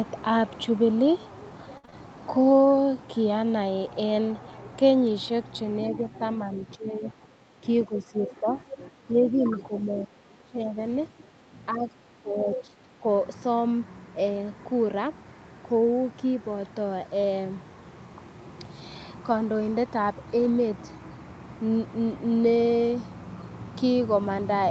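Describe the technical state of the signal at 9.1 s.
At 9.1 s the signal sits inside a stretch of speech suppressed in double talk, running from 5.89 to 10.79 s. The likely cause is that the echo canceller, faced with both ends talking at once, mistook the near talker for loudspeaker echo and attenuated it. The voice dips by up to about 15 dB and thins or drops out in pieces, for roughly four seconds in total, above a top end that already stops near 8 kHz.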